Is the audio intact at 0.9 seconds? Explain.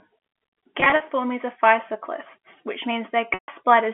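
No. Between 0.8 and 1.0 s, just before "are physoclists which", there is packet loss with pitch repetition. About 100 ms of audio, consistent with roughly five lost packets, is missing across that 200 ms stretch in runs of up to 40 ms. The receiver fills each gap by repeating the last pitch period, so the sound briefly holds with a buzzy quality.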